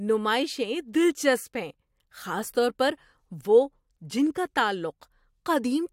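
Speech recording; no technical faults can be heard.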